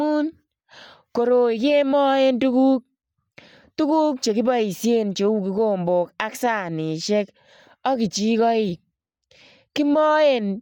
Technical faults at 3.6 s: Bluetooth LC3 compression

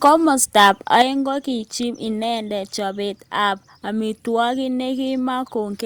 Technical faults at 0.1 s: microphone overload

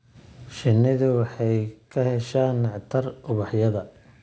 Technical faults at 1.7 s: aliasing

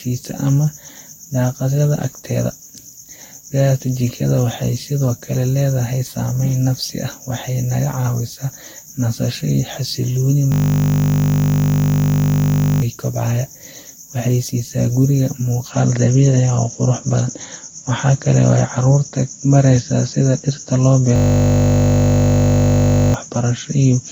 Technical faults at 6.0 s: generation loss

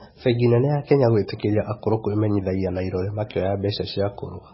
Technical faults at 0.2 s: MP3 compression

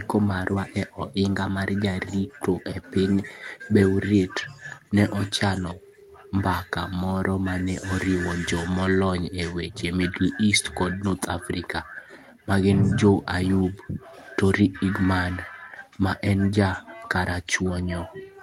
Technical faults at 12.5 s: clock drift between sender and receiver; repeated timing corrections; block of digital silence

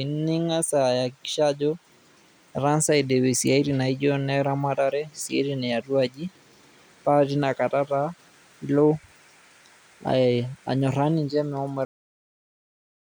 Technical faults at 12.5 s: cut-off end

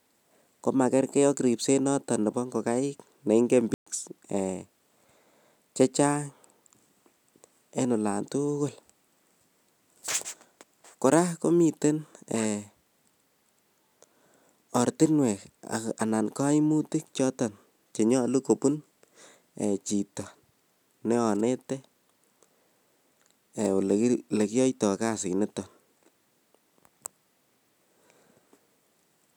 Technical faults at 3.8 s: playback stall

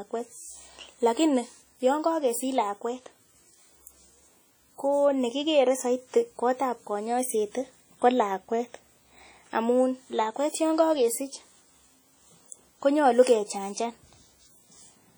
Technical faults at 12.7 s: WMA compression

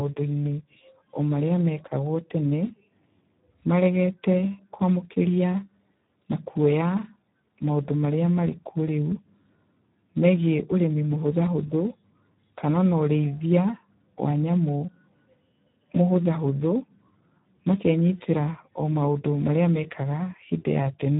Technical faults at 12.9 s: Speex codec

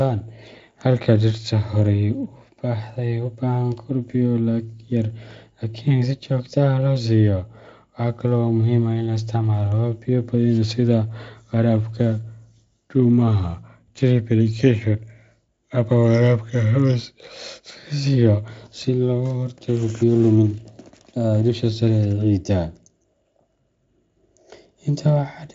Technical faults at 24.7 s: none

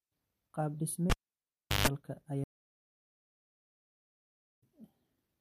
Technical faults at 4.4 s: stream reconnect

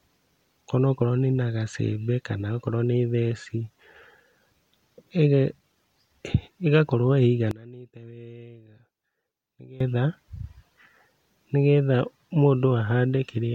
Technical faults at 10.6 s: none

